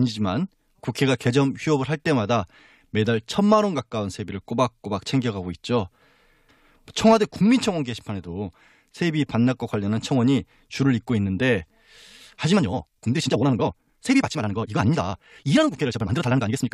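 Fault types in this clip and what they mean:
time-stretched section: likely software squeezing the audio to fit a length while keeping pitch, so from 12.5 s to the end speech runs 1.79 times faster, rushed.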